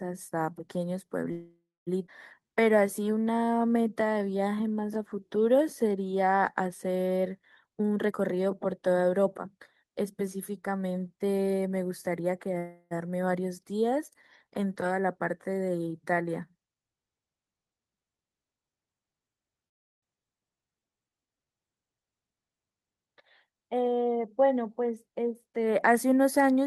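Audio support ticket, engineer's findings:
Call audio freeze, three events. 1.31–1.89 s: sound stalls, last sound stretched into a fading buzz, then about 250 ms of silence before resuming where it left off. 12.58–12.93 s: held buzz, barely any silence. 19.68–20.04 s: almost entirely dead air. Nothing lost, just inserted gaps of 0.55 s, 0.33 s and 0.35 s. Component: receive path, likely packets delayed in transit draining the jitter buffer empty.

Skip ahead at 2.07–2.10 s. Audible jump: speech lurches forward with almost no gap, joined nearly seamlessly. Roughly 0.4 s of audio gone. Component: jitter buffer discarding audio on overflow, or a stretch dropped in transit while later audio was already queued.

Jitter buffer slow-down, 2.40–5.90 s. Speech drags to 89% speed at unchanged pitch, vowels drawn out. 375 ms added. Component: jitter buffer refilling its reserve by repeating single pitch periods and pause fragments over and over.

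Jitter buffer speed-up, 7.61–9.99 s. Speech hurried, running at 123% speed with pitch unchanged. About half a second removed. Component: jitter buffer overfull, trimming short pitch-period slices repeatedly to bring delay back down.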